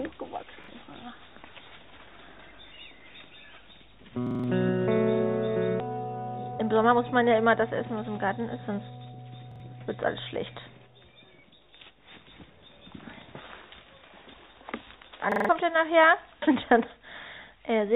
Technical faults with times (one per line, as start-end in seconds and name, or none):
0.64-0.68 repeated buffer
4.27-4.44 repeated buffer
5.80-5.82 skip ahead
6.36-9.13 jitter buffer speed-up
9.51-9.60 repeated buffer
15.32-15.49 repeated buffer